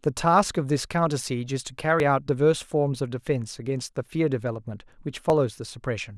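At 2.0 s and again at 5.3 s the speech jumps forward, as though a sliver of it, around 30 ms, has been cut out and the two edges spliced together. This is most likely a dropped buffer (overrun), where incoming samples were overwritten before the program read them. No silence or repeated sound fills the gap, which separates it from an underrun dropout.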